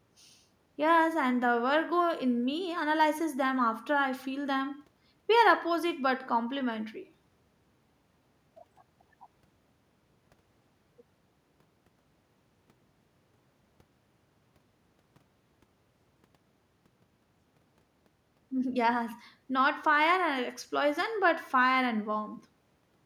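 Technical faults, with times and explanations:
No technical faults can be heard in the clip.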